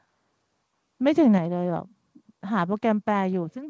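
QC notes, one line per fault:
1.08–1.28 s, microphone overload: the loudest syllables turn harsh and crackly, their peaks sounding flattened and gritty. The likely cause is input gain set too high, driving peaks about 1 dB past the converter's ceiling, so a small fraction of samples lose their tops.
1.38 s, microphone volume stepped down: the speech and the background fall abruptly by about 5 dB in a single step, just after the distorted stretch. This is likely the call software reacting to the clipping by cutting the device's input volume at once.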